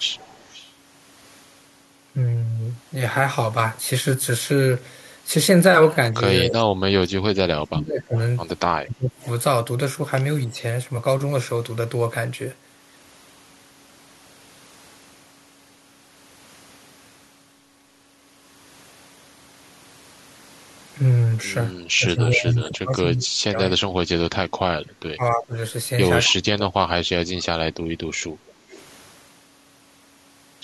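Echo leak, 0.16 to 0.72 s: a faint delayed copy of the speech trails the original by 268 ms, at about 25 dB below it. This is likely a loudspeaker at the far end whose echo canceller left part of what its microphone picked up, so that residue returned down the line. The same 268 ms echo recurs as brief scraps at 9.22 and 26.26 s, as a clearer stretch at 22.21 to 22.69 s at about 15 dB down, and again at 28.47 to 28.81 s.

Speech suppressed in double talk, 6.12 to 10.57 s and 21.97 to 27.68 s: the speech repeatedly dips and breaks up while the other side is also talking. The drops are roughly 30 dB at their deepest and add up to about two seconds in the first span and about four in the second. The likely cause is an echo canceller that could not tell the local talker from loudspeaker echo and turned both down together.

Background gated by the echo canceller, 28.55 s: during the last echo burst, the room sound behind the speech sinks by about 6 dB for about 150 ms and then comes back. 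The canceller clamped the microphone while the loudspeaker was active, pulling the ambience down with it until it released.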